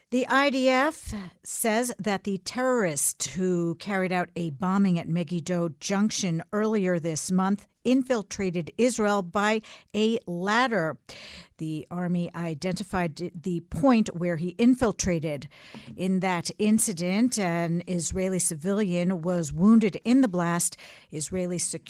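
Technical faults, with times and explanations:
Nothing stood out as a technical fault on listening to this speech recording.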